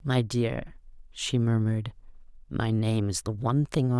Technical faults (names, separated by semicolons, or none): none